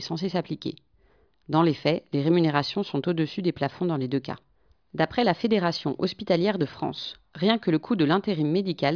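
No technical fault can be heard anywhere in this speech recording.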